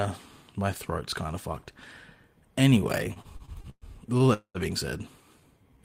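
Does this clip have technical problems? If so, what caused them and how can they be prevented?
Yes. Repeated stalls (stutter) run from 3.13 to 4.31 s. Packets arrived late ten times, and the receiver stretched the last sound across each gap, the longest 119 ms. About 0.3 s was filled in. Nothing is lost, but the speech drags and stutters. Network jitter should be reduced, for example by prioritising voice traffic.

A call audio freeze follows at 4.34 to 4.58 s. The sound holds as a fading buzz or hiss for 210 ms, with about 80 ms of silence, then resumes where it stopped. The likely cause is packets held up until the buffer ran empty, adding 210 ms of delay. A steadier network path would prevent it.

A jitter buffer slow-down starts at 5.40 s and continues to the end. The receiver repeated pitch periods to rebuild its reserve, adding 59 ms. Speech plays at 89% speed with the same pitch and drawn-out sounds. 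A larger starting buffer avoids this late slow-down.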